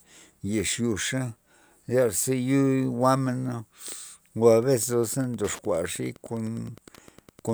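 From 4.44 s to the end at 7.54 s, a nearby Wi-Fi radio couples into the audio circuit, which rectifies its beacon every 102.4 ms. This Wi-Fi interference sounds like steady ticking about ten times a second, about 25 dB below the speech.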